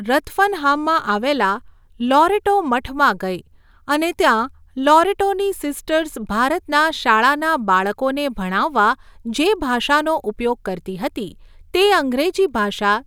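Speech, with nothing technically wrong to report.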